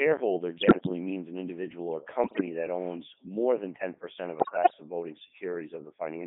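Robotic, buzzy speech runs throughout, confined to roughly 200 Hz to 3.5 kHz. That points to heavy Codec 2 vocoder damage, likely at its top 3.2 kbit/s rate, which rebuilds the voice from sine waves instead of keeping the waveform.

Warbling bleeps with jumps in pitch and level break in at 0.56 to 0.89 s before "means an individual or", at 2.24 to 2.46 s before "that owns more than", and at 4.40 to 4.74 s before "of voting". These are bit errors on digital voice radio. Roughly a tenth of the bits flipped in the first burst, and somewhat fewer in the others, corrupting the vocoder's frame parameters.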